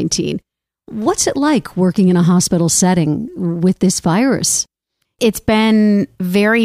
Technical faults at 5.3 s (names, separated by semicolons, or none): none